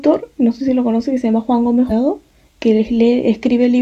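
At 1.86 to 1.92 s, a run of compressed frames was skipped: the decoder never played several consecutive blocks of the speech, either because they were missing from the file or because it rejected them as damaged. The speech jumps ahead by about a fifth of a second, which fits roughly four frames of about 46 ms each.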